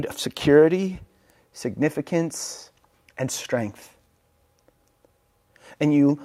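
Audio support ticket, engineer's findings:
No audible faults found in this speech recording.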